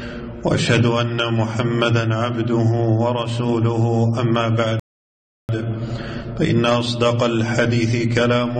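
A rebuffering stall runs from 4.80 to 5.49 s: playback starved of downloaded data, fell silent, then resumed exactly where it stopped, adding about 0.69 s.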